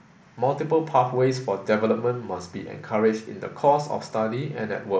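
No technical faults can be heard in this speech recording.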